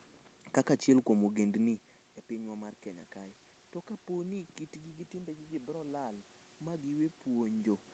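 At 5.11 s, after "po ni kitgi gi", the input falls by about 14 dB, and the automatic gain control raises its gain by about 6 dB until 7.78 s. This automatic gain rising makes the voice and room noise swell slowly together.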